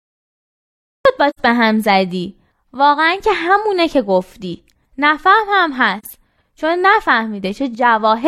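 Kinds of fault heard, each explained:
Cut-off start: The recording began late. Speech enters abruptly from digital silence at 1.05 s, mid-sound, with no natural attack or fade-in.
AAC frame loss with muting: Lost frames were decoded as silence. This leaves soft-edged holes of 85 ms at 1.29 s and 43 ms at 5.98 s, fitting two frames and one frame.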